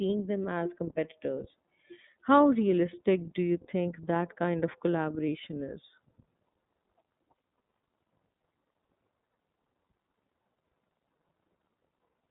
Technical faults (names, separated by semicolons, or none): iLBC codec